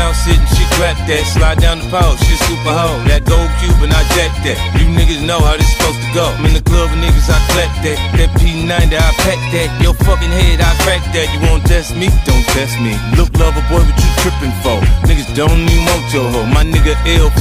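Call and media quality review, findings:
Drift correction step, 9.22–10.99 s. Sound plays 5.4% fast with pitch raised about 92 cents, close to a semitone, then snaps back. Likely cause: the clock-sync resampler changed the playback rate in one step to drain its buffer. Spectrogram: all harmonics shift upward together at 9.22 s and drop back at 10.99 s. Waveform: events slightly compressed in time across that span.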